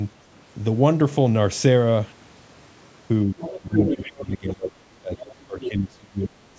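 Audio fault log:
3.29–4.73 s, 4.97–5.12 s and 5.46–6.58 s: speech suppressed in double talk. The voice dips, thins and breaks into fragments. The drop is around 20 dB in the first stretch, about 15 dB in the brief second one and as deep as about 30 dB in the last. Roughly a second is affected in each longer stretch. The likely cause is an echo canceller that could not tell the local talker from loudspeaker echo while both ends spoke at once, so it pulled both down.
3.41–3.58 s, 3.75–4.05 s, 4.61–4.70 s, 5.17–5.35 s and 5.60–5.69 s: other side's voice leaking through. Short scraps of a second voice surface. The loudest, at 3.75–4.05 s, sits only about 5 dB under the talker. The others are fainter: about 10 dB down at 4.61 s and 5.60 s, about 15 dB down at 3.41 s, and about 20 dB down at 5.17 s. These are likely loudspeaker playback that the echo canceller failed to strip from the microphone signal.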